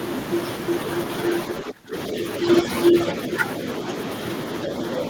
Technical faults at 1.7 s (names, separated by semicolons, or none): speech suppressed in double talk